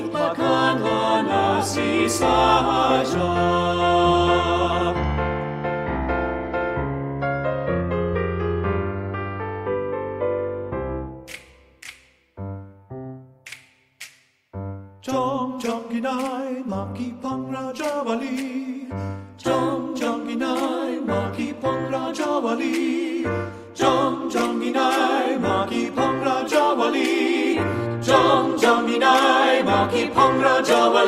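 No technical faults can be heard anywhere in the clip.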